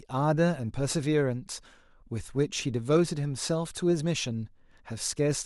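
No technical faults can be heard anywhere in the speech recording, and the signal stays intact and continuous throughout.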